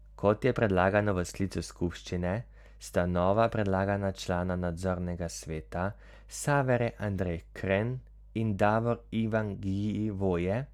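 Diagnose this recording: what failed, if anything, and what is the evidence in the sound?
Nothing in this speech recording points to a failure at any stage, so there's no evidence here for any fault.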